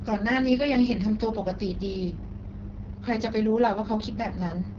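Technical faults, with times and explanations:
Throughout, AMR wideband (HD Voice) codec: the speech sounds rough and raspy, pointing to the lowest AMR-WB rate, where a coarse pulse-driven model carries the voice and noise fills the top band. A spectrogram shows smeared harmonics and a sharp ceiling at 7.1 kHz.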